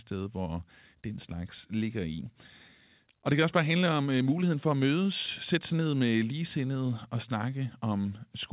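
No technical faults can be heard in the speech, which arrives over the call path with the narrow, telephone-like band of a G.711-style codec and nothing above 4 kHz.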